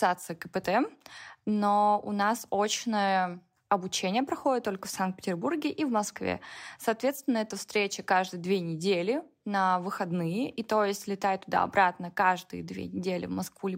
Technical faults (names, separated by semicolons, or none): none